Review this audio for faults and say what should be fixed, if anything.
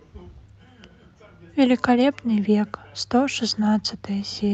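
No faults; nothing to fix.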